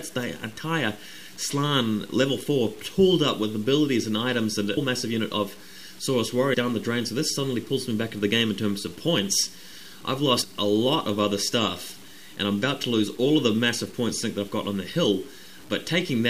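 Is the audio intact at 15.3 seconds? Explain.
No. At 15.3 s, as throughout the clip, the sound is coarse and grainy in a way that likely comes from low bit depth without dither: about 7 bits, truncated rather than rounded. The error tracks the signal, roughly 25 dB down, so quiet passages turn gritty.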